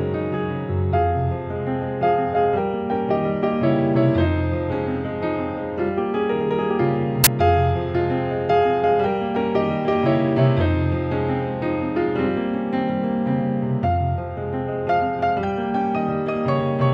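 At 7.24 to 7.27 s a hard-edged burst of very loud white noise cuts in: file tags played as audio, an embedded cover picture read as samples.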